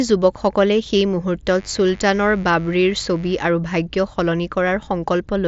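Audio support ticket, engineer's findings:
Mains buzz, 1.54–3.46 s: raspy 50 Hz buzz about 25 dB under speech. Dimmer or unshielded rectifier spiking twice per cycle; harmonics reach several kHz; mSBC passes nothing above 7.7 kHz.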